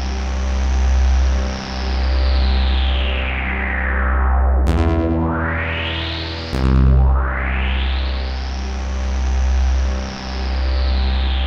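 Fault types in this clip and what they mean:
No technical faults can be heard anywhere in these sounds. Nothing in the recording calls for a fault description.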